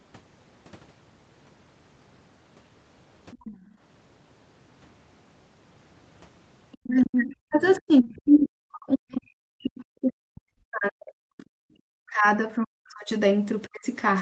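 At 3.31 to 3.57 s a faint second voice sits beneath the speech, about 20 dB down. This is likely the other side's voice leaking through, where loudspeaker playback escaped the echo canceller. On a spectrogram it shows as thin, separate harmonic traces under the main talker. Overlapping it, from 3.51 to 3.8 s, the background is gated by the echo canceller. The canceller clamps the microphone, and the room sound drops by about 11 dB for roughly a third of a second. On the waveform the noise floor visibly notches down, then recovers.

Brief leakage returns at 6.72 s, around 30 dB down, and again at 7.65 to 7.74 s, around 25 dB down. Each is a short, faint smear of harmonics on the spectrogram.

From 6.8 to 12.4 s the talker's own speech is suppressed in double talk, likely because the canceller could not separate the talker from the echo while both sides were active. Across about five seconds the voice dips and cuts out in pieces, by as much as 40 dB. 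The waveform shows chopped, collapsing envelopes, and the upper harmonics thin out on the spectrogram. The same suppression recurs at 12.57 to 13.1 s and 13.67 to 13.86 s as sharp gaps in the waveform.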